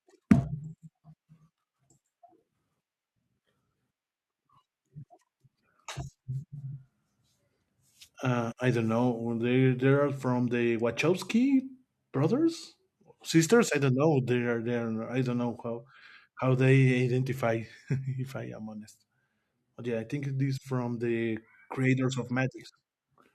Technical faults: none

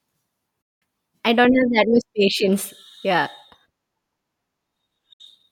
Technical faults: digital broadcast dropout

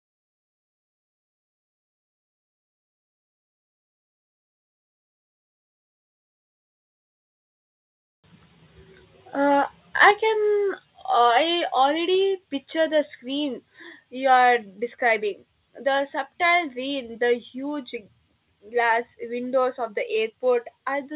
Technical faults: microphone overload; microphone volume stepped down

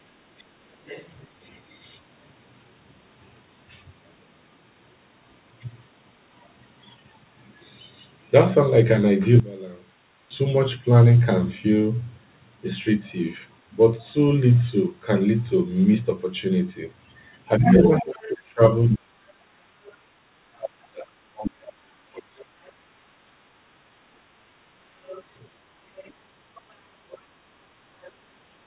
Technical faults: background gated by the echo canceller; other side's voice leaking through; one channel inverted; speech suppressed in double talk

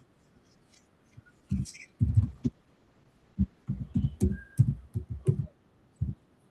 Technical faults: call bitrate drop

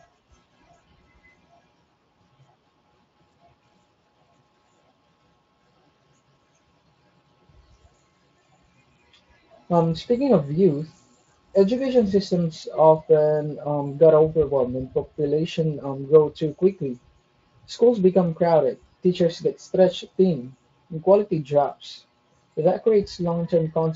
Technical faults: none

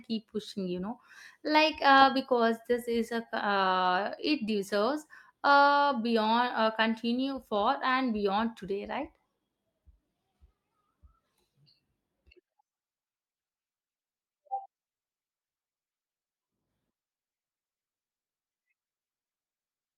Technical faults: none

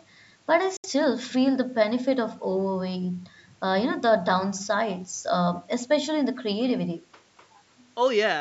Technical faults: Bluetooth dropout

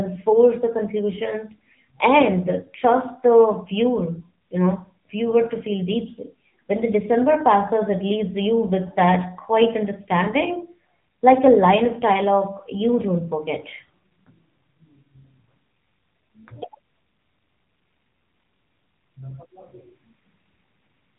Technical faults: AMR narrowband mobile codec

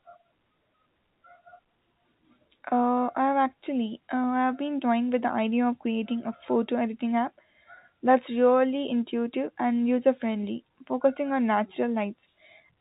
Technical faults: none

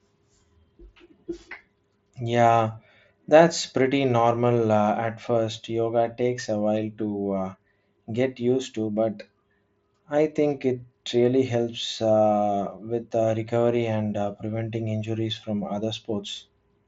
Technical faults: none

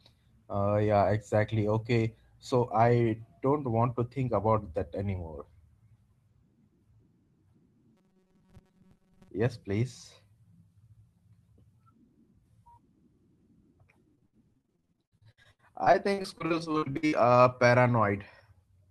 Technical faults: robotic sound from repeated short buffers; repeated packet loss (robotic sound)

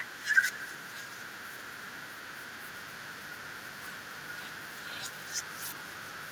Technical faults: echo with no canceller

